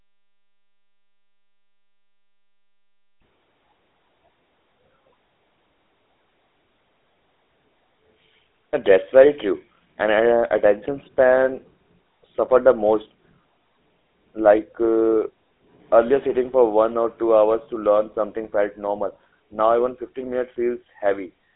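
From start to finish the speech has gone through a GSM full-rate codec, and you can plainly hear it. The coder keeps a crude vocal-tract model and rebuilds the voice from a sparse pulse train, which gives that buzzy, gravelly edge, consistent with the 13 kbps GSM rate. The line band runs roughly 250 Hz to 3.6 kHz, with nothing at all above 3.8 kHz, so the voice sounds thin and boxed in.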